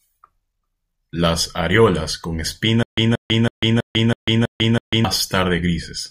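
Right after "areolas con", from 2.83 s to 5.05 s, the speech turns into a stutter with silent gaps. A 178 ms fragment plays, then 147 ms of digital silence follows, and the pattern repeats seven times at an even 325 ms period. The likely cause is a stalled player or stream that replayed its last buffered fragment at each retry and then ran dry. The speech that belonged in that span is lost.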